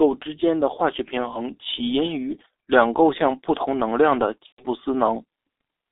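From start to finish the speech passes through a G.723.1 codec, and the damage is heavy. The line band runs from 300 Hz to 3.7 kHz, so a spectrogram shows empty space above 3.7 kHz and a thin floor below 300 Hz. The coarse, slowly updated voice model blurs the formant bands into smeared blocks, which fits a 6.3 kbit/s mode. Consonants lose their crisp edges, and the voice sounds muffled and hoarse.

At 4.46 s, just after "同能量的", there is VoIP packet loss concealed by the speech codec, lasting until 4.65 s. About 120 ms of audio is missing, which fits four lost 30 ms frames. The decoder repeats its last pitch and filter and lowers the gain each frame, so the sound stretches and fades, and from the third lost frame it is muted. The waveform shows a stepwise decaying envelope that stays weak briefly before normal speech structure returns.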